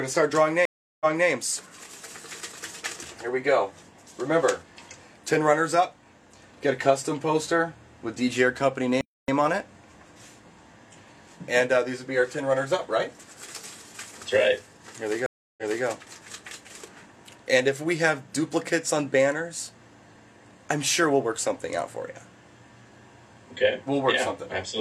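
The audio has two stream reconnect events and one playback stall. At 0.65 s the sound drops out for about 352 ms, and when it returns it picks up 279 ms earlier than where it broke off, so a short stretch is heard twice. The same happens at 15.26 s, with 312 ms of silence and again a 279 ms step back. That repeat is the sign of a broken connection: the player restarted its decoder mid-stream and the server resent a burst of audio from slightly before the break. At 9.01 s the sound instead stops for 273 ms and then carries on. This playback stall is likely a player that ran short of data or had its output thread blocked.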